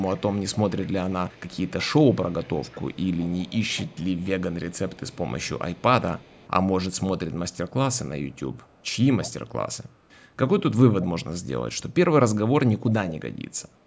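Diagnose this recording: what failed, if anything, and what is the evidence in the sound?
A faint delayed copy of the speech, trailing it by about 195 ms, runs from 0.0 to 5.82 s. It returns briefly from 6.16 to 6.5 s and again from 8.21 to 8.88 s, each time weaker, falling from roughly 25 dB below the speech to around 40 dB below. This is echo leak in the call-processing stage, likely a loudspeaker-side echo canceller letting residual pickup through and sending it back. The band-limited sound, with nothing above 8 kHz, comes from the call chain.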